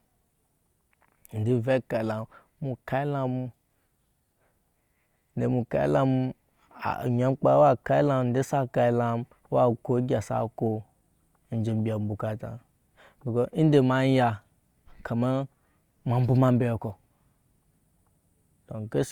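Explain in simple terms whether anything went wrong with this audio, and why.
Nothing went wrong here.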